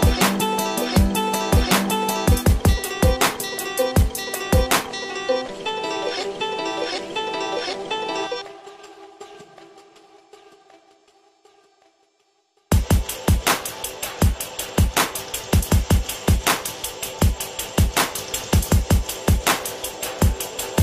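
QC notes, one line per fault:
Nothing stood out on listening.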